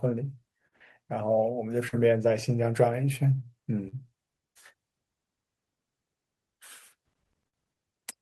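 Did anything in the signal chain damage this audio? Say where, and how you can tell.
Yes. Network stage: short concealed packet loss at 0.67, 1.88, 3.88 and 7.48 s. Each 40 ms gap was filled by extending prior sound, heard as brief smears.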